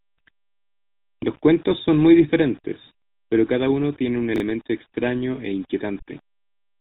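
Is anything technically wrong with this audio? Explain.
Yes. Three faults are audible in this speech.

Throughout, quiet passages and decaying syllable ends turn gritty and grainy, with a rough noise floor only about 35 dB below the speech that rises and falls with it. This is likely low bit depth without dither: the signal rounded to about 7 bits, so the error tracks the waveform instead of staying a smooth hiss.

Also throughout, the voice has a buzzy, gravelly roughness and sounds dull, with nothing above 4 kHz. That is the GSM full-rate codec, which fits a 13 kbps coder. It rebuilds speech from a vocal-tract model driven by sparse, regularly spaced pulses, and that coarse excitation produces the buzz.

From 4.36 to 4.4 s, between "cada uno tiene un" and "extraño e", there is a brief jumbled stutter. These are chunks out of order: a 20 ms piece plays one chunk late, swapping places with its neighbour and leaving hard joins.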